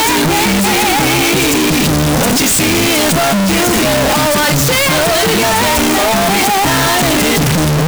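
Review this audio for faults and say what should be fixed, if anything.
The whole clip, start to finish, is blasting and harsh, with the waveform slammed into a near-square shape at an almost fixed, high level and the background noise as loud as the main sound. That's the float read as integer fault: 32-bit float samples were likely read as 32-bit integers, so sign and exponent bits set the level. Fix it by making sure the reading side's sample format matches what was written.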